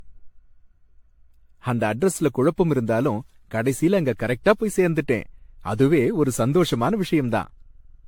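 Speech, with generation loss throughout: the sound is swirly, smeared and hollow, attacks blur, and nothing remains above 18.6 kHz. The texture fits around ten successive AAC-LC passes near 96 kbit/s, likely from repeated decoding and re-encoding, each pass adding fresh quantisation noise.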